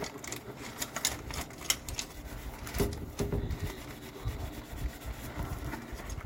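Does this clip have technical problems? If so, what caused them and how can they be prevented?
Yes. Sample clock jitter runs through the whole clip: the converter's clock wanders by a few microseconds, so each sample is taken slightly off time. The resulting error scales with how steeply the waveform is changing, giving a hiss and roughness that sits around 25 dB below the sound, swells on loud, bright passages and disappears in silence. On a spectrogram this shows as a broadband noise haze that tracks high-frequency energy. Using a low-jitter clock source with clean power and reclocking at the converter prevents it.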